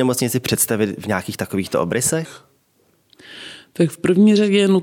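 From 2.25 s, right after "v nějakých takovýchto", to the end, a section at the wrong speed: playback drops to 0.85x, so the speech turns slower and deeper by roughly three semitones at once, likely from that segment being fitted to a mismatched clock.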